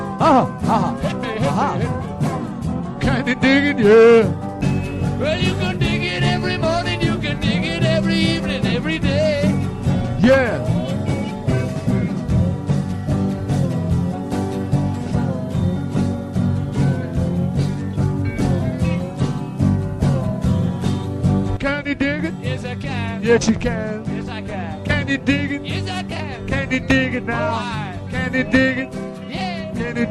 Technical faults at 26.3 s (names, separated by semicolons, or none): resampler restarted on every block